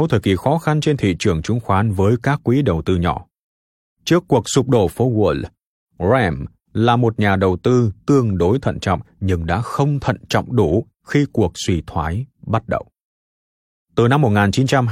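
No technical faults can be heard anywhere in the speech. Nothing in the audio calls for a time, a value or an explanation of a failure.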